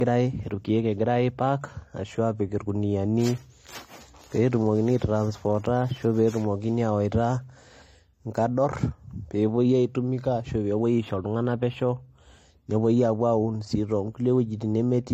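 Throughout the speech, nothing sounds above 16.4 kHz, and two layers of codec smearing are heard together. This is likely transcoding between lossy codecs, which fits HE-AAC re-encoded as AAC-LC.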